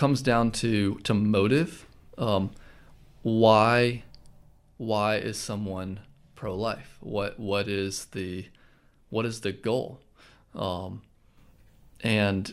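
Clock drift buffer slips run from 1.58 s to 12.44 s: a regular click recurs every 1.55 s, around seven times in all. This is likely two devices running on separate clocks that disagree by something on the order of 100 ppm. The buffer between them slowly drifts until a handful of samples, only a few at each event, is dropped or repeated, leaving a tiny discontinuity heard as that steady tick.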